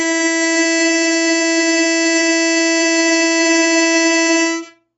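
From start to finish the music is band-limited, with nothing above about 7.7 kHz, and sounds dull and smeared, with plainly audible warbling. This is likely AAC compression, AAC-LC at a low rate that fits roughly 24 kbps, sacrificing treble and spectral detail to save bits.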